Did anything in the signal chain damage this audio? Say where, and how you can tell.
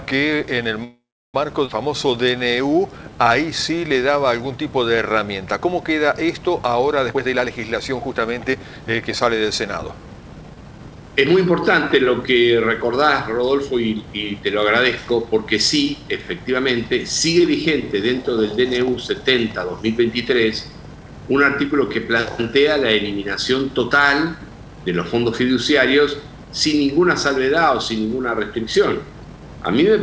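Yes. The damage is in the network and jitter-buffer stage of a call path, on a G.722 stream at 64 kbps that carries nothing above 8 kHz.

A call audio freeze runs from 0.84 to 1.36 s. The last sound carries on as a fading buzz or hiss, then dies into silence for about a third of a second. Nothing is lost. The audio resumes where it stopped, now half a second late. That points to packets being held up until the jitter buffer ran empty. Stalled delivery is the likely cause.

A skip ahead follows at 1.66 to 1.69 s. A 16 ms fill bridges the cut. Then playback lands further on, with roughly a fifth of a second gone. The two sides butt together almost directly. This is what happens when audio is dropped on the way or by an overflowing jitter buffer while later audio is already waiting.

A jitter buffer slow-down spans 1.90 to 4.18 s. The audio plays at 91 percent speed with no pitch drop. Sounds stretch. 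About 218 ms is added over that stretch. The receiver was repeating single pitch periods and bits of pauses to rebuild a reserve while the buffer ran low or its target delay had just risen. That repetition gives the drawn-out quality.

Jitter buffer speed-up shows up three times. From 7.11 to 7.51 s the audio rushes at 159 percent, losing roughly 200 ms. From 7.91 to 9.43 s it runs at 108 percent, losing about 100 ms. From 9.85 to 11.03 s it runs at 112 percent, losing around 150 ms. The pitch holds steady while the timing hurries. The buffer was trimming short pitch-period pieces to shed excess delay.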